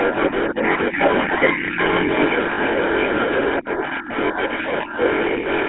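GSM full-rate coding runs through this whole speech clip: the band is held to roughly 250 Hz to 3.4 kHz, and the coarse pulse excitation gives a plainly audible buzzy, gravelly roughness, which points to the 13 kbps full-rate codec. Speech suppressed in double talk dips the level at 0.0–1.01 s, 1.26–2.1 s, 2.71–2.84 s and 3.56–5.01 s, by as much as about 15 dB at the deepest. This is likely an echo canceller that could not tell the talker from the far-end echo and turned both down. Lost GSM frames at 2.54–2.59 s leave about 40 ms of speech held as a rough metallic ring, because the decoder repeats the last good frame's settings, which fits two missing 20 ms frames.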